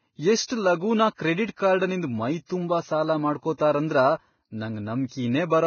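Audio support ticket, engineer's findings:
Heavy Vorbis compression artefacts throughout: speech hissy and grainy, treble gone above 6.6 kHz. Likely a low-rate Vorbis encode, consistent with about 17 kbps. Coarse residue quantisation turns fine detail into noise. Spectrogram: hard ceiling at 6.6 kHz, speckled treble.

Pre-echo at 0.44–0.50 s (55 ms) and 1.14–1.19 s (41 ms): short hiss before sharp onsets, attacks smeared. Transform-block quantisation noise spreads ahead of the transient. Waveform: low noise ramp before the onset. Spectrogram: broadband smear before the attack column.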